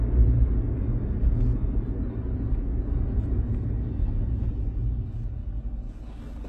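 A short recording of sounds with heavy, gritty treble from start to finish: highs turn metallic, and nothing reaches above 12.3 kHz. That's likely HE-AAC compression, with the top rebuilt from copied lower bands in a way that fits roughly 16 kbps.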